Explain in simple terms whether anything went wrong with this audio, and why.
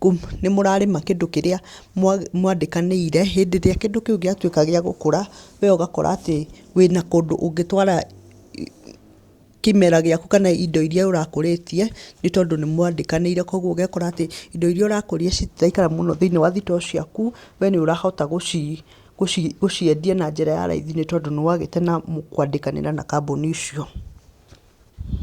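Nothing went wrong with this recording: there are no technical faults to be heard.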